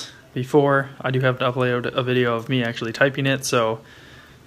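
No technical faults can be heard in this audio. Nothing in it points to a problem with how the sound was captured or delivered.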